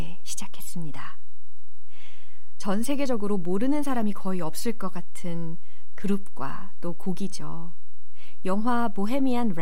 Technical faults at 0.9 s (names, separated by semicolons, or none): DC offset